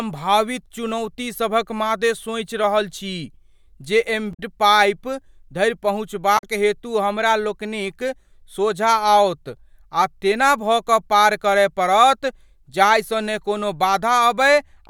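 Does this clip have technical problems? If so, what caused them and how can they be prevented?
Yes, two short bursts of damaged data in the compressed stream, at 4.31 to 4.40 s and 6.35 to 6.43 s. Corrupted bytes make the decoder misread frames and resync, producing quick glitches. Checksummed transfers and verified storage would prevent it.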